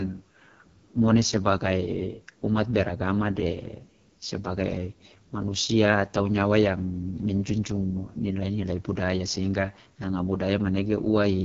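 From start to finish the speech has been through the AMR wideband (HD Voice) codec, and the rough, raspy texture suggests it's running at its lowest mode, around 6.6 kbit/s. At that rate the vocal tract model and pulse excitation get too few bits to track the voice, so it sounds gritty and buzzy, and the band above about 6.4 kHz is just shaped noise rather than real detail. Nothing comes through above about 7.1 kHz.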